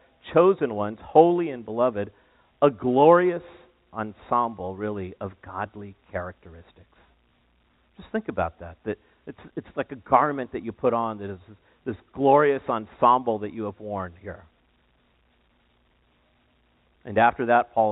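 Nothing in this recording of speech points to a technical fault. It sits within the narrow telephone band, with nothing above 4 kHz, and any trace of the low-level noise that tracks its loudness is faint at most, which fits an ordinary 64 kbps G.711 A-law telephone path.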